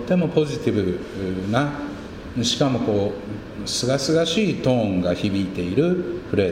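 Nothing is technically wrong with the audio, so there are no times or causes to give.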